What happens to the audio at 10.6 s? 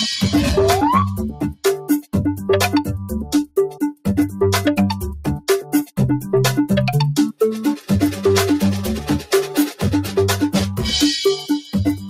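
Hard clipping runs through the whole clip, including 10.6 s. The signal is driven about 10 dB past what a stage can pass, so peaks are sliced flat, a bit under a tenth of the samples. The flattened tops add high harmonics, heard as a harsh fuzz on the louder parts.

A noise suppressor applied to music or sounds is also active at 10.6 s and throughout. A speech-tuned suppressor mistakes sustained tones, ambience and decays for noise and pulls them down by around 10 dB, while attacks pass. The sound pumps and thins as tails sink.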